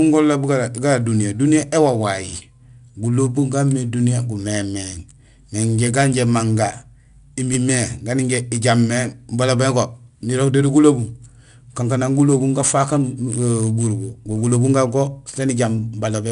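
From start to end the speech carries 4-bit ADPCM compression. Each sample is coded as a coarse step from a prediction, so a gritty hiss rides on every loud syllable. Attacks sound rough. Nothing is heard above 10.6 kHz, which fits a rate near 89 kbps.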